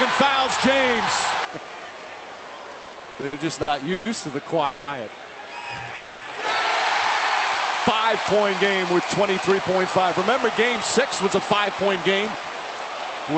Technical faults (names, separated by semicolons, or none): repeated stalls (stutter); call audio freeze